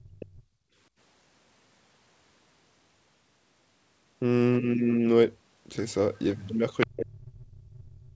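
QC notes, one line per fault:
0.0–0.42 s, 6.15–6.19 s, 6.8–6.87 s: other side's voice leaking through. The echo canceller likely missed some loudspeaker playback, so a second voice surfaces. It is well below the talker at first, barely audible at 6.15 s, and nearly as loud at 6.8 s.
0.35–0.76 s: background gated by the echo canceller. The canceller clamped the microphone while the loudspeaker played, so the room sound drops by up to about 26 dB for roughly 0.4 s before returning.
6.86 s to the end: speech suppressed in double talk. Both sides spoke at once, and the canceller likely mistook the talker for echo. It turned the talker down by around 40 dB at worst, leaving the voice dipping through the final stretch.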